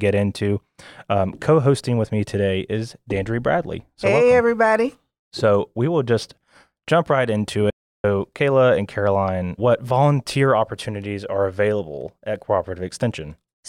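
Speech, with an audio dropout to silence from 7.70 to 8.04 s. About 0.34 s vanishes into silence, likely from a brief input loss.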